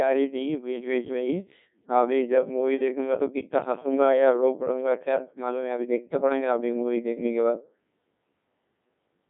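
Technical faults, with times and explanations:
Throughout, Codec 2 vocoder: the speech is robotic and buzzy, with a thin, narrowband tone and nothing above about 3.6 kHz. The heavy damage fits a rate of around 1.6 kbit/s. The original waveform never arrives. Only pitch, voicing, energy and a coarse spectral envelope are sent, and the decoder rebuilds the voice from sine waves within a band of roughly 150 Hz to 3.5 kHz. That rebuilding is what gives the flat, mechanical buzz.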